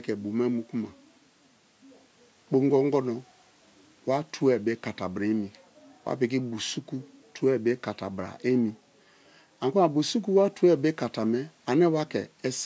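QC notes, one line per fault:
No faults found in this speech clip. The call microphone processing leaves nothing above 8 kHz, and faint room noise sits about 42 dB below the speech.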